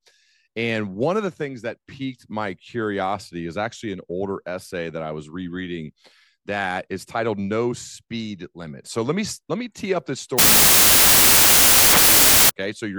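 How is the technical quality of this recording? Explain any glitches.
A wrong sample width fault, from 10.39 to 12.50 s, disrupts the recording. The bytes are being split into samples of the wrong size, which fits 32-bit integer data read as 16-bit. Each original value becomes two mismatched ones, so only some keep the real signal's top bits. The result is loud noise with the original sound buried inside, running at half speed, an octave low.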